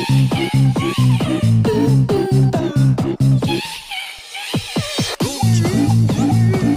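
From 4.73 s to the end, Wi-Fi interference appears: the circuit rectifies a nearby radio's beacon, sent every 102.4 ms, producing faint ticking nearly ten times a second, about 40 dB below the sound. Its exact, steady rhythm distinguishes it from random clicks or continuous mains hum.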